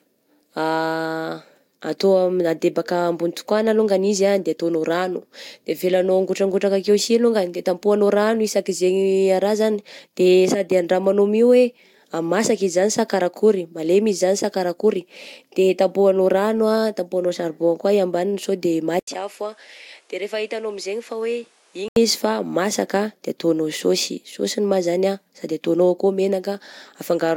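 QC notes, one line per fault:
18.99–21.96 s, input switched to a poorer device. After an 80 ms gap, the speech loses everything above 11.9 kHz. It drops about 10 dB and gains a new noise floor roughly 30 dB below it. The likely cause is a change to another, narrower-band input.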